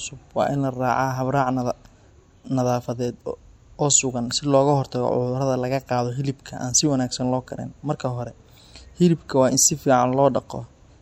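All the way through, the speech carries plainly audible MP3 compression damage, likely from an encode at a low bitrate, something like 64 kbps. Nothing survives above 17.1 kHz, so the top end sounds shaved off. Starved of bits, the encoder drops quieter frequency detail, and what remains flickers in and out between frames. That gives the voice a watery, swirly texture, and the s sounds pick up a metallic chirp.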